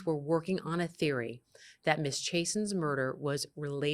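No technical faults are audible.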